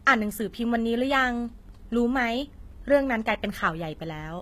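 From start to finish the speech carries plainly audible HE-AAC compression damage, likely from a low-rate HE-AAC v2 encode around 20 kbps. Its treble is rebuilt from copied lower bands, sounding gritty and metallic, with nothing above 14.9 kHz.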